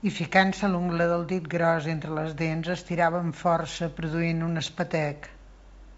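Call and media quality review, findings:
No faults found; speech carried over the G.722 wideband path at 64 kbit/s, with content reaching about 7.7 kHz as that coding allows.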